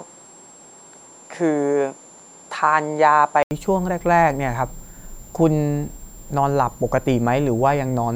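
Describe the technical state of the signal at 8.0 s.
At 8.0 s the switching supply whistle persists, as throughout: a thin tone wandering between 7.15 and 7.58 kHz, roughly 25 dB below the speech, from a supply in audible burst mode or beating with another one.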